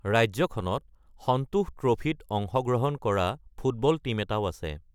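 Listening to the speech here, nothing stood out as a technical fault at any point.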